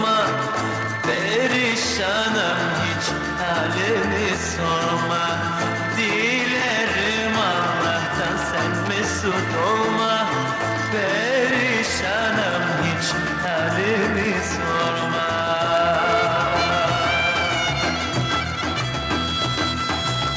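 Nothing is technically wrong with this audio, which carries the sound of a call's microphone processing, with its bass trimmed by the usual high-pass filter and nothing above 8 kHz.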